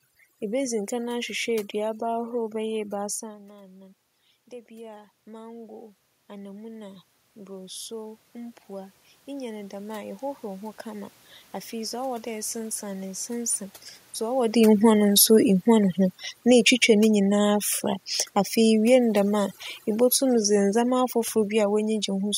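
Overdone noise removal runs through the whole clip. The noise reduction was set too strong. Frequency bands near its noise estimate are pulled far down or shut off, and quiet parts of the speech are cut with them. The room noise between phrases drops and breaks up into twinkling specks. This holds from start to finish.

Around 3 s the talker moves, and the level drops by about 17 dB. The automatic gain rising follows from 4.68 to 11.2 s. The control judged the input too quiet and raised its gain slowly, by about 12 dB in all. Voice and leftover background swell together over several seconds. The level never fully returns to where it started.

Near 14.5 s the talker moves again. The automatic gain falling follows, from 14.47 to 17.64 s. The control judged the input too loud and lowered its gain by about 4 dB. The sound starts loud, then sinks gradually with its background. A second automatic gain falling runs from 18.57 to 21.92 s, with the same drop of about 4 dB. 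Again voice and background fade together.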